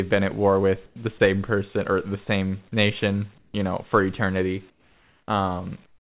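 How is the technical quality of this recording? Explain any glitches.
The speech comes through a narrowband call path with nothing above 4 kHz, which fits G.711 A-law, and the pauses carry a recurring glitch.

Comfort noise in place of the background appears at 0.86–0.96, 3.38–3.54, 4.7–5.28 and from 5.86 s to the end. The real room tone drops out for a flat, featureless hiss about 7 to 14 dB quieter. The likely cause is the sender going silent during pauses while the receiver synthesises filler noise.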